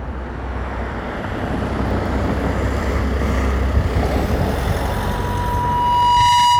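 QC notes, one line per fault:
1.38–2.43 s, CD scratch ticks: a scratch or blemish on the disc corrupts more data on each revolution than the error correction can rebuild, so the player patches the gap by interpolating or muting the damaged samples. The result is five small, regularly spaced ticks, roughly four to five a second, each lasting no more than a couple of milliseconds. They are evenly paced because the same damaged spot passes the laser once per turn.
4.76–6.59 s, loudspeaker feedback squeal: a microphone is picking up the loudspeaker it feeds, and at 972 Hz the gain around that loop exceeds one. That frequency reinforces itself on every pass, so a single tone near 1 kHz swells over roughly a second and a half until it sits about 5 dB above the rest of the sound. It continues as a steady howl until the clip ends, because nothing breaks the loop.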